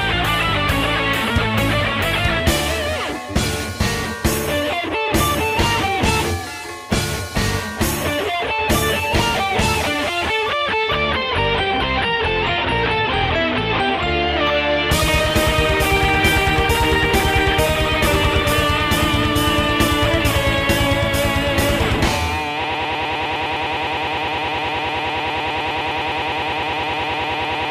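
At 22.64 s a broken-record loop begins and runs to the end: a 0.10 s fragment repeats back to back about 50 times, giving a rapid buzzing stutter. A stalled player or stream likely kept resending its last buffer. The waveform shows identical repeating blocks, and the spectrogram shows regular vertical stripes.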